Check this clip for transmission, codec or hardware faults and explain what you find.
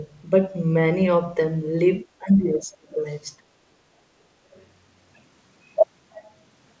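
Two kinds of fault appear in this speech, both pointing to the echo canceller on the talker's device rather than to the codec. The call path itself comes through with nothing above 8 kHz, which fits a wideband codec such as G.722 at 64 kbps.

Speech suppressed in double talk, from 2.04 to 2.98 s and again from 3.4 to 3.6 s. When both ends talk at once, the echo canceller likely cannot tell the local talker from loudspeaker echo and attenuates everything. The talker's level sinks by roughly 25 dB in the first stretch and roughly 30 dB in the second, so the speech drops away and returns in pieces. Together the two dips cover nearly a second.

Other side's voice leaking through, from 3.1 to 3.15 s and from 4.53 to 4.65 s. Here the echo canceller likely lets part of the far end's loudspeaker playback back into the microphone. The result is a faint second voice, some 35 to 40 dB below the talker. 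It appears only as brief scraps, the first about 50 ms long and the second about 120 ms, rather than as sustained echo.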